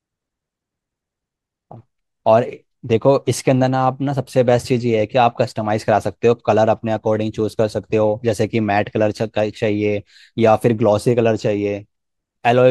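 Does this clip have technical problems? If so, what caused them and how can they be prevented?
Yes. Clock slip clicks run from 0.17 s to 12.63 s as faint, regular ticks about ten times a second. A likely cause is two devices on free-running clocks roughly 200 ppm apart, each slip dropping or repeating one sample. Locking both devices to a shared word clock prevents this.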